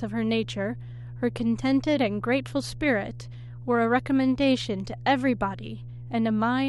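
A speech recording with mains hum running the whole way through: a steady 60 Hz tone sitting fairly high, roughly 15 dB under the speech. That's the power line leaking into the signal, most plausibly through a ground loop or a transformer sitting near the gear.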